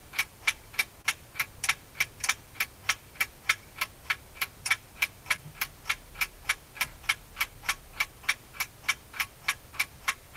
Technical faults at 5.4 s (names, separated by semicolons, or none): short concealed packet loss